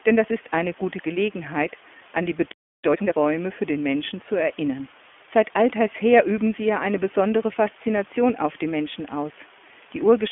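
From start to finish, low bit depth with dither leaves a constant, even hiss roughly 25 dB below the speech, consistent with about 7 bits. Because the rounding error is dithered, it is smooth noise rather than gritty, signal-dependent distortion.

Also throughout, the iLBC codec confines the speech to a 250 Hz to 3.4 kHz telephone band with nothing above 3.6 kHz, which fits its 15.2 kbps, 20 ms-frame mode. The rough, slightly synthetic texture is plainly audible, and each frame's excitation is coded independently, unlike a simple band-limited line.

From 2.84 to 3.16 s, between "an die" and "für den", a time-compressed catch-up plays the audio at twice normal speed by cutting and cross-fading small pieces. Pitch stays normal, unlike a plain speed-up.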